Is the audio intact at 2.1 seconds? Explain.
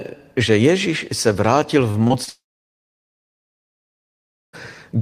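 No. From about 2.07 to 2.12 s the speech shows short concealed packet loss. Roughly 20 ms of audio failed to reach the decoder in time, and the receiver covered the gap with about 25 ms of synthesized signal, extending the preceding sound's pitch or its noise character, then crossfading back into the real stream. The result is a brief smear or wobble at that point rather than a clean transition.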